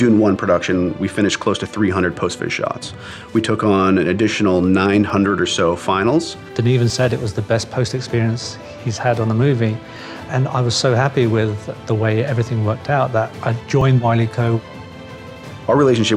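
Jumps at 0.36, 3.21, 5.10, 6.90, 8.10, 9.96 and 13.81 s, each skipping ahead without silence, likely a dropped buffer (overrun): roughly 10 ms lost, nearer 30 ms at 9.96 s.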